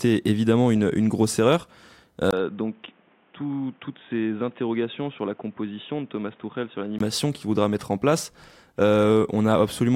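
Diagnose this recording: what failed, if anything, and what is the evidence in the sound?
From 2.31 s to 7.00 s the speech turns boxy and quieter, with its own background noise about 30 dB below the speech, band-limited at 3.7 kHz after a 20 ms gap: likely an input switched to a poorer device.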